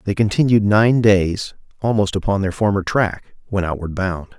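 From start to end, the speech carries sample clock jitter. The converter's timing wanders by around a microsecond, so each sample lands slightly early or late. That timing slip turns into an amplitude error wherever the waveform changes fast. The result is a faint hiss and grain, roughly 50 dB below the signal. It rises on loud and bright syllables and sibilants. It disappears in the pauses.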